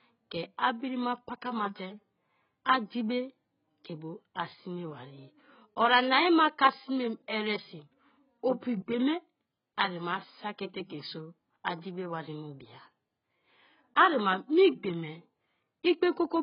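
From start to finish the speech sounds dull and smeared, with nothing above 5.1 kHz and a heavy warbling, fizzy texture on sibilants and sustained sounds. The likely cause is AAC compression at a very low bitrate, around 12 kbps, where the encoder discards high bands and coarsely quantises the rest.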